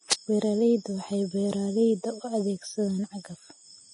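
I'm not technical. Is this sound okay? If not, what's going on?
No. The speech sounds hissy and grainy throughout, with no sound above 10.6 kHz. That is likely heavy Vorbis compression turning fine detail into noise.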